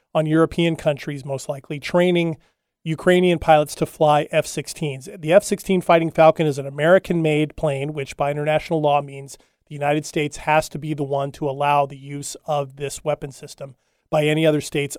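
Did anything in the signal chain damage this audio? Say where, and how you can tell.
No, nothing along the way seems to have damaged this speech, and I can't hear any trace of trouble from any stage of the chain.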